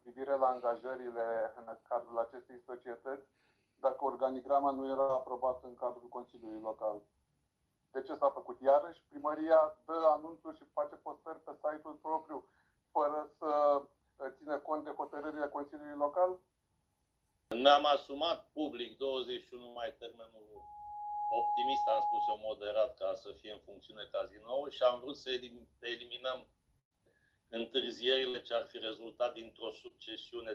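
Call audio carried through a band-limited codec, cut off around 12 kHz, which fits Opus at roughly 32 kbps, shows two short concealed packet losses at 1.63–1.69 s and 29.88–29.92 s. Each is a tens-of-milliseconds smear or wobble where the receiver extrapolated the missing sound, seen as a brief blurred patch on a spectrogram. Four bursts of packet loss, at 5.01–5.11 s, 19.69–19.77 s, 26.79–26.93 s and 28.29–28.36 s, each drop 60–120 ms of audio. The gap is bridged by a fading held buzz or hiss, and the waveform collapses to flat silence for about 100 ms at 26.8 s. A loudspeaker feedback squeal from 20.56 to 22.39 s is an 832 Hz tone swelling over roughly 0.7 s to about the level of the surrounding sound, drawn as a single bright horizontal line on a spectrogram, caused by the microphone re-amplifying its own loudspeaker.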